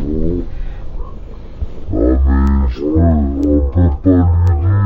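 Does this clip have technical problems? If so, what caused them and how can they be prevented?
Yes. Throughout the clip there is a stereo-read-as-mono fault: interleaved left and right samples were read in sequence as one channel, so every frame yields two consecutive samples. The audio plays at 0.5× speed and sits 12 semitones, a full octave, too low. On a spectrogram, the content is compressed into the lower half of the band, with a fainter mirrored copy in the upper half. The waveform looks stretched to twice its proper duration. To prevent it, read the file's channel count from its header and deinterleave the samples before playback or processing.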